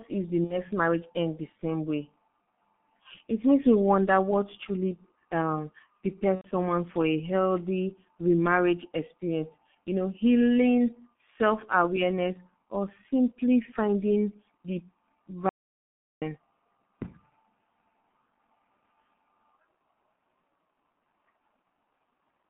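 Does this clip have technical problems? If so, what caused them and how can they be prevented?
Yes. Throughout, the speech sounds muffled and hoarse, with smeared consonants and nothing above 3.5 kHz or below 150 Hz. This is heavy G.723.1 codec damage: 30 ms frames and a slowly updated voice model, consistent with about 6.3 kbit/s. A wideband codec at a higher bitrate would prevent it.

At 0.44 to 0.61 s, between "if the" and "marriage ends the same", and at 6.35 to 6.48 s, just before "for a healthy remarriage", the sound turns into a buzzy or noisy stretch and fades, then stays weak briefly. This is VoIP packet loss concealed by the speech codec. The decoder extends its last frame when about 60 ms and then 90 ms of audio go missing, which fits two and three lost frames. A jitter buffer, forward error correction or a steadier network link would prevent it.

From 15.49 to 16.22 s the audio drops out to silence for about 0.73 s, with no room tone at all. 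This is most likely an audio dropout to silence from a lost input that was written as silence. Secure connections and monitored inputs would prevent it.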